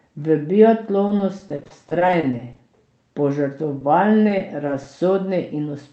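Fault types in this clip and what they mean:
Repeated packet loss (robotic sound): Lost packets leave holes that the receiver fills by extending the last sound. This happens in rapid succession from 1.07 to 2.62 s, with gaps up to 30 ms, and again from 4.28 to 4.87 s. Both stretches sound choppy, with small pieces missing.
Short stall from a late packet: When a packet arrives late, the jitter buffer runs dry and the receiver holds the last sound until it comes. This happens at 3.79 to 3.83 s, where about 20 ms is stretched and nothing is lost, giving a brief held moment with a slight buzz or dip.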